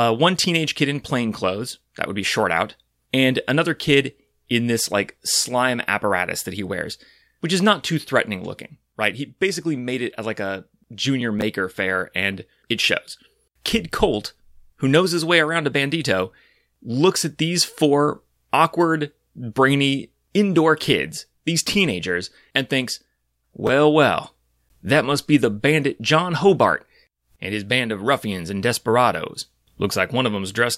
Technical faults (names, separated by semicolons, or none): chunks out of order